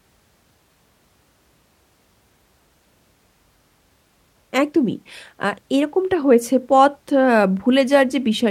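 Listening to this speech recording, nothing stood out as a technical problem.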